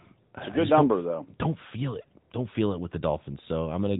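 From start to finish the speech carries AMR narrowband mobile codec damage, plainly audible as a boxy, buzzy, synthetic tone, which fits the 10.2 kbps mode. A spectrogram shows a hard ceiling near 3.8 kHz, with nothing above it.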